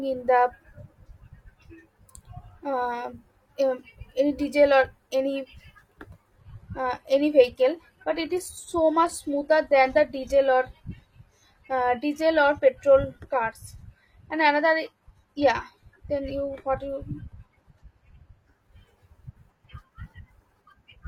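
At 6.38 s the speech abruptly loses quality, with no gap. This is an adaptive stream at a lower bitrate, switched in as throughput fell. Nothing remains above 14.9 kHz, and artefacts rise. It fits HE-AAC near 24 kbit/s. Quality returns at 18.38 s.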